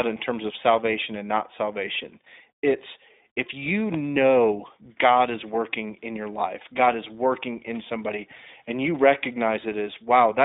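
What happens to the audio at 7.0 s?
At 7.0 s, as throughout, the iLBC codec codes each 20 ms frame independently, leaving the speech rough and synthetic, with nothing above 3.8 kHz.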